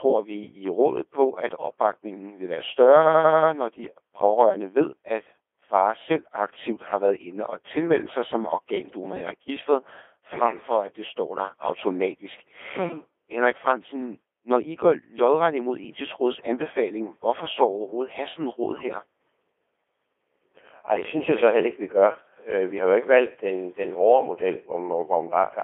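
From start to finish the speech passes through a Codec 2 vocoder, heavily damaged and band-limited to roughly 300 Hz to 3.5 kHz. The robotic buzz suggests a low-rate mode, consistent with 2.4 kbit/s. Only pitch, voicing and envelope survive, so the resynthesised voice shows neat harmonic stripes with smeared gaps between them and a waveform unlike the original.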